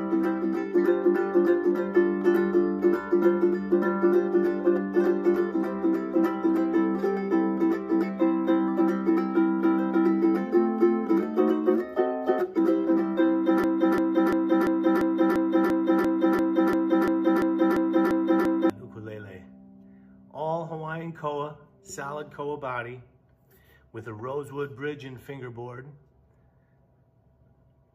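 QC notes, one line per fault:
13.64–18.70 s, broken-record loop: a 0.34 s fragment repeats exactly, back to back, 15 times, and the audio due in those five seconds never plays. Likely a stalled player or stream resending its last buffer. The identical repeats over seconds set it apart from a brief stutter or a dropout's silence.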